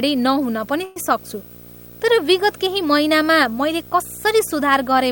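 A screen or video cable coupling into this speech recording produces video or display buzz throughout: a buzz at the 59.94 Hz field rate with hash above it, plus a thin whine at the 15.7 kHz line rate, roughly 15 dB below the speech. From 0.84 to 0.97 s there is a call audio freeze, likely from packets held up in transit draining the jitter buffer. The receiver stretches the last sound into a fading buzz or hiss for about 116 ms with no silence, then the speech resumes where it stopped, nothing lost but running 116 ms later.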